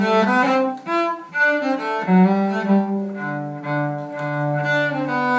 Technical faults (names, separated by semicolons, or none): none